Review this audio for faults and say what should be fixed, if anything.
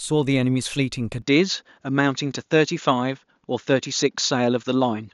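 From 1.22 s onward the speech turns dull, nothing above 7.1 kHz, with faint new hiss: likely the input switched to a poorer device. Lock the recording input to the intended microphone so the system cannot switch devices mid-take.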